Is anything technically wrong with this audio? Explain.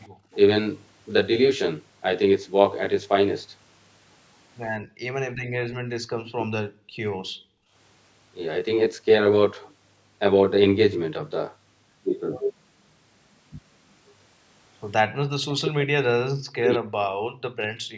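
Yes, there are four kinds of fault in this speech clip.

Channel delay (comb filtering) runs throughout. One channel arrives about 20 ms late and the two are summed to mono, so shared content cancels at evenly spaced frequencies starting near 30 Hz. The result is a steady rough, slightly doubled colouring across the whole clip.

Echo leak appears from 0.04 to 0.34 s and from 6.25 to 6.45 s. The far end's echo canceller likely failed to remove everything its microphone picked up from the loudspeaker. A copy returns about 200 ms late, at about 35 dB below the speech at first and about 15 dB below at 6.25 s.

Background gated by the echo canceller occurs from 0.09 to 0.31 s, from 4.8 to 5.01 s and from 5.34 to 7.74 s. The canceller pulled the microphone down while the loudspeaker played, so the room tone drops by about 23, 35 and 38 dB respectively and then returns.

Speech suppressed in double talk occurs from 15.27 to 16.84 s and from 17.41 s to the end. 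Both sides likely talked at once, and the canceller cut the talker along with the echo. The voice drops by roughly 40 dB during these stretches. The call's microphone processing keeps nothing above 8 kHz, which is normal.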